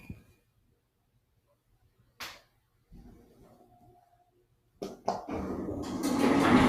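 A clip of sounds rather than speech, run through a noise suppressor built for speech. The suppressor treats steady and fading parts as noise and turns them down. Gain swings by roughly 10 dB, so the level pumps and thins. Sudden parts pass more easily than held ones. Sound cut by the noise suppressor is clearest in three stretches. From 0.0 to 2.2 s, sustained parts sink by up to about 18 dB, for roughly a second and a half in total. From 2.39 to 2.93 s, they drop by up to about 16 dB. From 3.13 to 5.07 s, they fall by up to about 18 dB again, and decays are cut short.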